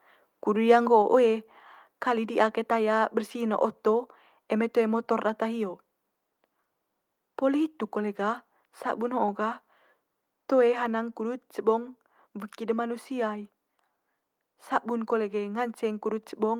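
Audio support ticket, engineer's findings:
Microphone volume stepped down: abrupt level drop of about 3 dB in speech and background together at 1.02 s and again at 10.86 s. Likely cause: call software's automatic gain control lowering device input volume in single steps.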